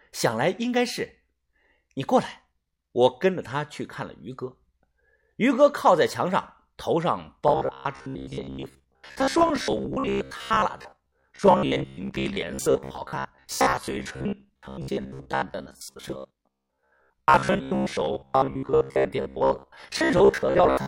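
From 7.48 s right through to the end, the speech goes robotic: a rigid, metallic buzz at about 66.7 Hz that still loosely tracks the words. That's likely repeated short buffers, with roughly 15 ms chunks looping to cover about half the time while real audio gets skipped.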